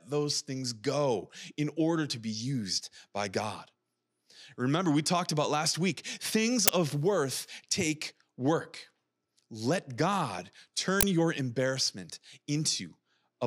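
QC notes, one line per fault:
6.68 s and 11.01–11.03 s, uninitialised buffer: two short, loud bursts of digital noise, the first right after "about last week things" and before "of worth take work", the second just before "your embarrassment". Each time a playback block went out before audio had been written to it, so stale memory was played as samples. The bursts last about 12 ms and 23 ms, which fits a 512-sample and then a 1024-sample buffer. Unlike a dropout's silence or a single click, each one is a full block of noise.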